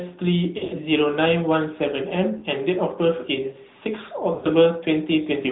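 Throughout, the speech carries the AMR narrowband mobile codec sound. Nothing above 4 kHz survives, and the voice has a plainly audible buzzy, synthetic edge, which points to a mid-rate mode of around 10 kbps. A simple low-pass filter would only dull the sound. This codec rebuilds the voice from a vocal-tract model driven by sparse pulses, so the damage is in the texture, not just missing treble.

Three patches of lost AMR speech frames break in. From 0.58 to 0.82 s, losses are scattered over about 200 ms, with the longest unbroken run near 80 ms. That run is long enough that the voice smears and starts to fade before it recovers roughly. A brief warbling dip comes at 2.38 to 2.44 s, which suggests two frames. Around 4.34 to 4.47 s, a longer smear fades off. Unlike clean dropouts or silent gaps, the decoder fills each hole by repeating the last good pitch and spectral shape at falling level. 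The result is drawn-out, fading sound rather than abrupt silence.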